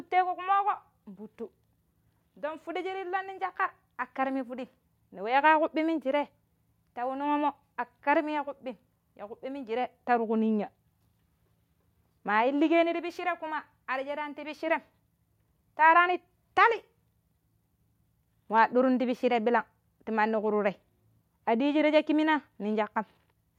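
No technical faults can be heard anywhere in this speech recording. Nothing in the audio points to a problem in how it was captured, processed or delivered.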